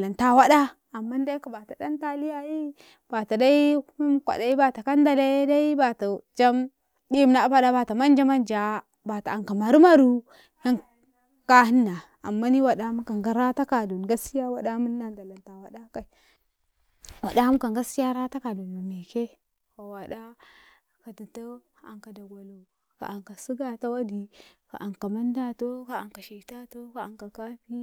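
Nothing stood out on listening to the speech recording.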